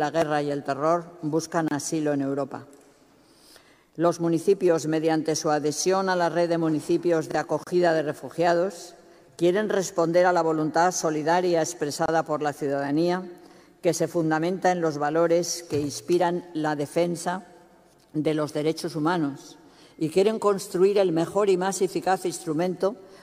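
Short dropouts open at 1.68 to 1.71 s (29 ms), 7.64 to 7.67 s (31 ms) and 12.06 to 12.08 s (25 ms): a gap at a join of encoded pieces, where untrimmed encoder start delay and end padding leave brief silences with smeared edges before the sound resumes.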